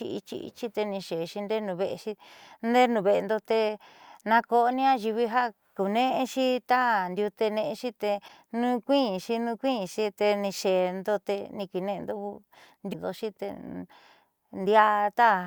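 A speech recording marred by three brief bursts of damaged data in a compressed stream, at 4.69 to 4.72 s, 8.24 to 8.30 s and 12.89 to 12.95 s. Each is a short disruption lasting roughly 30 to 60 ms, where corrupted bytes make the decoder misread frames and lose sync until it finds the next valid header.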